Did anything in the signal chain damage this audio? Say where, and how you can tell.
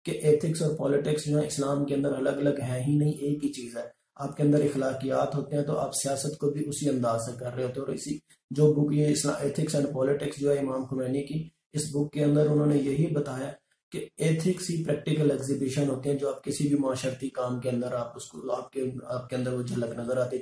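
No, nothing in the signal chain stood out as damaging this audio on listening.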